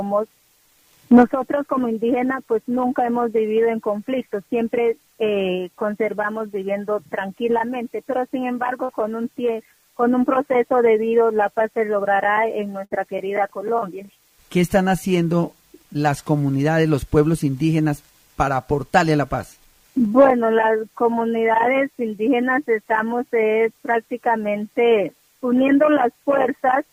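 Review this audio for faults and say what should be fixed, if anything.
Two bursts of packet loss, at 8.83 to 8.92 s and 12.85 to 12.94 s. Each time, the receiver stretches the last sound for about 55 to 60 ms, letting it fade as a buzz or hiss, then jumps ahead with roughly 60 ms of audio gone. Adding a bit more jitter-buffer headroom or some forward error correction on the link should cover short bursts like these.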